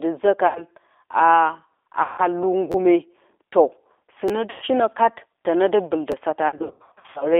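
Throughout, the speech sounds narrow, slightly rough and synthetic, with plainly audible damage and nothing above about 3.6 kHz. This is the G.729 codec, which rebuilds the voice at 8 kbit/s from a vocal tract filter, pitch prediction and a few pulses per frame. Its line band runs from 300 Hz to 3.6 kHz.

From 0.47 to 0.65 s the sound smears into a fading buzzy tone or coloured noise. This is VoIP packet loss concealed by the speech codec: 80 ms of audio went missing, and the decoder stretched its last pitch and filter while lowering the gain. The voice stays weak just after the gap. The same happens from 2.02 to 2.22 s, where a 160 ms gap leaves a longer fading smear.

From 2.72 to 2.74 s a tiny fragment stutters as a brief buzz with hard joins. This is a repeated buffer: new audio arrived late, so the last 11.6 ms chunk played twice more. That fits a 512-sample buffer and costs roughly 20 ms of audio. 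A single repeat gives a click-like stutter at 4.28 s.

Concealment returns from 4.50 to 4.65 s, covering 120 ms with the same fading smear.

Just after "tene dɨ", at 6.12 s, another single buffer repeat gives a brief click-like stutter.

From 6.48 to 7.27 s the sound repeatedly thins and smears. Scattered packet loss removed 460 ms of audio over 720 ms, in runs of up to 80 ms. Each recovery is spoiled by the previous concealment.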